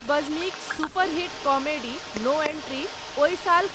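An echo leak runs through the whole clip, from 0.00 to 3.74 s. The far end is likely playing the call over a loudspeaker while its echo canceller fails to fully suppress what its microphone hears back, so part of the speech returns down the line. The result is a second copy of the speech trailing the original by about 294 ms, sitting roughly 15 dB below it and audible as a delayed repeat, within the 8 kHz call bandwidth.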